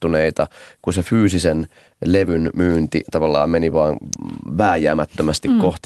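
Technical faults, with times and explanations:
4.13 s, electrical switching spike: a sharp snap sits on top of the speech, lasting about a millisecond. Its abruptness and broadband character point to a brief arc being picked up on the audio line, likely from a nearby switch, motor or static discharge. Even through the call path's band limit at about 12 kHz, the transient comes through as a hard click.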